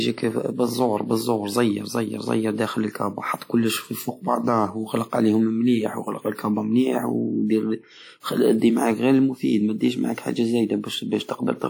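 Throughout, the speech has a ringing, washy smear and hiss that breathes with it, likely WMA compression at a bitrate around 48 kbps.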